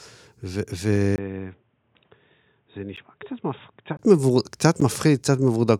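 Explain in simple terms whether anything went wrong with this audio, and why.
Three brief blocks of digital silence cut the speech at 0.96 s, 2.96 s and 4.80 s. The audio drops to nothing for about 4 to 12 ms and is heard as a tick or dip, likely because the software missed its buffer deadline.

From 1.16 s to 3.99 s there is a likely input switched to a poorer device. After a 20 ms gap, the speech turns dull, noticeably quieter and noisier, with nothing above 3.8 kHz.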